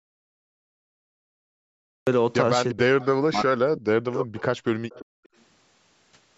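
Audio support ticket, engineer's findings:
Audio dropout to silence, 0.00 to 2.07 s, already under way when the clip opens. Silence with no room tone, then sound resumes abruptly. Likely a lost input link with the encoder still writing samples. Waveform: flat line. Spectrogram: empty black block.

Speech suppressed in double talk, 2.73 to 4.42 s, about 1.5 s affected in total. Voice dips in pieces, deepest around 40 dB down. Likely the echo canceller attenuating the near talker while the far end spoke. Spectrogram: speech bands fading and breaking up.

Echo leak, brief scraps at 3.01 to 3.06 s, 4.90 to 5.05 s and 5.24 to 5.43 s. Faint delayed copy of the voice at 342 ms, roughly 20 to 35 dB below the speech. Likely residual loudspeaker pickup passing the canceller. Spectrogram: ghost harmonics repeating the earlier pattern, offset in time.

Background gated by the echo canceller, 5.05 to 5.30 s, about 200 ms. 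Room sound drops sharply, about 40 dB, then returns when the canceller releases. Waveform: noise floor pinched almost to nothing. Spectrogram: brief dark notch across the band, which ends at 8 kHz because of the call's microphone processing.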